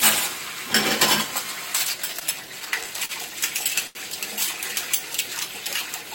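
From 2.19 to 3.11 s the sound stutters with repeated stalls: packets arrived late five times, the jitter buffer kept running dry, and the receiver extended the last sound for 97 ms in total, longest 40 ms. Nothing is lost, but the audio drags. A spectrogram shows brief smeared, held bands, the waveform short repetitive stretches.

At 3.87 to 3.97 s a short stall from a late packet holds the sound for 82 ms until the packet arrives, adding 82 ms of delay, with a slight buzz or dip. It shows as a flat, stretched patch on the spectrogram and a repeating waveform segment.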